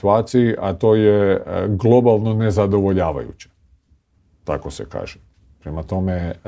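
No technical faults can be heard in this audio.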